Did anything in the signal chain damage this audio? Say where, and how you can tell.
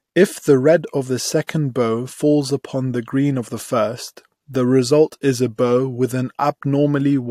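No, listening through this speech recording, nothing in it stood out as damage from any stage of the signal chain.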